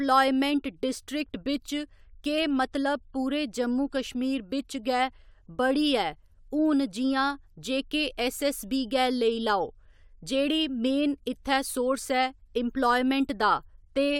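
Speech recording with no audible technical faults anywhere.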